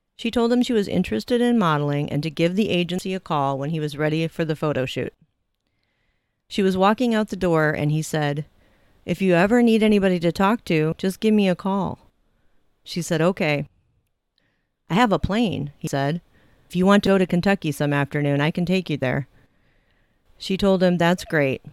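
A dropped buffer (overrun) is heard at 2.99 s, between "and to give the" and "a call when he", and again at 10.92 s, at 15.87 s after "I have a plane", and at 17.07 s after "you want". Each time the speech jumps forward with no gap. About a tenth of a second of sound is missing, likely because the recording program failed to collect a buffer before the hardware overwrote it, so the two sides were spliced together.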